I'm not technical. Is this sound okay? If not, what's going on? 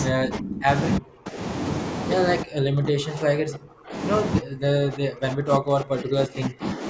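No. The speech dips sharply or drops out in pieces from 0.09 to 0.69 s, 0.99 to 1.39 s, 2.43 to 3.97 s and 4.4 to 6.84 s. This is speech suppressed in double talk, likely because both sides of a call talked at once and the echo canceller turned this side down.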